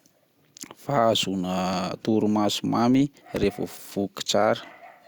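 At 1.73 to 1.75 s a single loud pop, and at 3.36 to 3.46 s a double one, sit over the continuing speech, likely from a plug, switch or static pulse. The waveform shows spikes above the signal, the second near 10 dB higher. Spectrograms show broadband vertical stripes.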